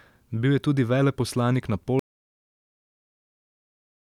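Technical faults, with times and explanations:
1.99 s to the end: audio dropout to silence. The speech stops abruptly mid-flow at 1.99 s and does not return. From there the clip holds complete silence, with no room tone or hiss underneath. Nothing from the last two seconds survives. This most likely means the input was lost, through a disconnected device, a failed link or a mute, while the recorder kept writing silence. That is why the gap is empty rather than quiet.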